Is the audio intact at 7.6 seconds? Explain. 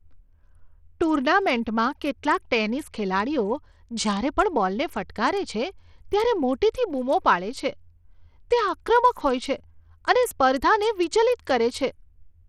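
No. At 7.6 s, as throughout the clip, the speech carries plainly audible Bluetooth SBC compression damage, likely from a starved link consistent with roughly 80 kbps. Too few bits reach the upper sub-bands, so treble flickers and drops out while a gritty, aliased grain rides on the sound.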